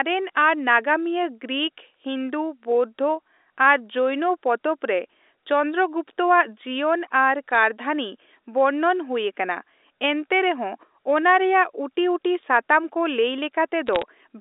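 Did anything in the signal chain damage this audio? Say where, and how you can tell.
Yes: bit errors on the digital phone line, in transmission after G.711 A-law coding. Flipped bits corrupt individual samples, giving a sharp tick at 7.55 s and a short crackle from 13.86 to 14.02 s, at error rates of around 0.2 and 0.15 percent respectively.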